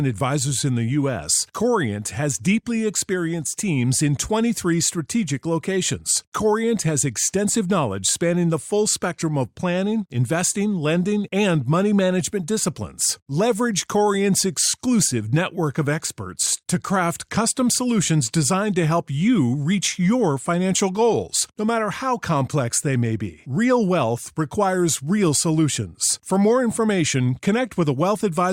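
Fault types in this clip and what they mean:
No technical faults can be heard anywhere in the speech recording: the signal stays continuous and stable, with no dropouts, level jumps or other disturbances.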